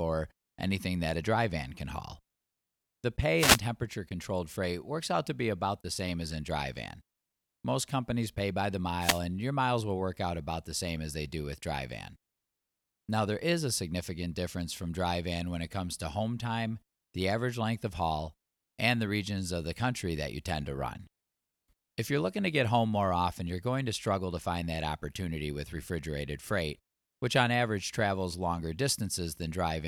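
Short bursts of static swish across the speech at 3.36 to 3.60 s, just before "controlled freight works out", and 9.00 to 9.20 s, between "companies pay by the" and "and your miles will". These are wireless microphone noise hits: the FM radio link fades as reflections cancel, letting receiver noise surge over the voice.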